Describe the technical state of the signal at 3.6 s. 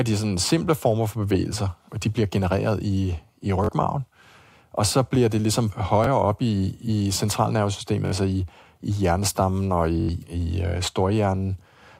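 At 3.64 to 3.69 s, just after "bliver genereret i i", the speech breaks into a short, rapid stutter, a brief buzzing repeat, and then picks up slightly further on, as though it had kept running underneath. This is a Bluetooth stutter. Audio packets arrived late or not at all, so the receiver kept replaying its last buffered slice until fresh data came in. About 43 ms of audio went missing, which points to two lost packets.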